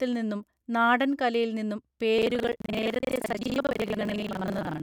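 A robotic rattle of about 23.4 Hz takes over the speech from 2.18 s to the end at 4.83 s, buzzing wherever there is sound. This is buffer tearing. The writing program and the playback hardware have drifted so they cross inside every period, and most of each buffer replays audio roughly a tenth of a second old, with hard joins on both sides. The repeat rate fits a 2048-sample buffer.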